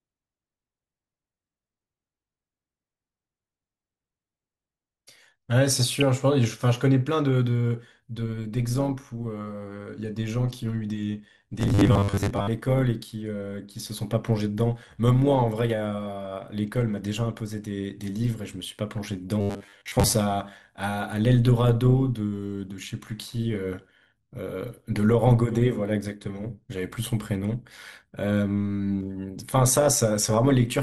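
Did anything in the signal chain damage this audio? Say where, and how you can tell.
Yes. At the codec stage the speech sounds dull and granular throughout, with upper bands flickering in and out and a gurgling edge on what remains. This MP2 compression damage is plainly audible and is likely from Layer II coding at a low rate, consistent with about 80 kbps.

In the processing stage there is overlap-add ripple from 8.15 s to the end: a metallic buzz with extra tones around each note, a ripple of about 6 dB at around 100 Hz. Frames were windowed and recombined with an overlap that doesn't sum to constant gain, so the level dips once per frame.

In the driver or buffer stage there is a robotic sound from repeated short buffers between 11.60 and 12.48 s and again between 19.41 and 20.14 s. A rigid metallic buzz at 100 Hz follows the speech loosely. This is likely caused by starved buffering, with the last 10 ms looped and roughly half the real audio skipped.

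At the broadcast transmission stage there is DAB burbling from 30.20 to 30.34 s, a brief patch of short noise blips in single sub-bands. This fits bit errors at a low rate, a fraction of a percent, slipping past error correction and corrupting about six MP2 frames.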